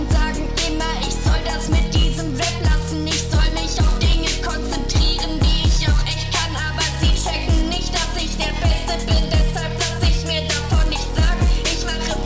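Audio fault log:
1.39–12.25 s: resampler restarted on every block. Each 10 ms block is converted alone, leaving edge errors heard as a 100 Hz buzz only under sound.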